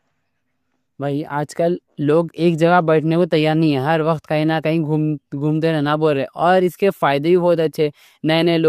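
Nothing in this bit of speech trips the ear as a technical fault at any point along the way.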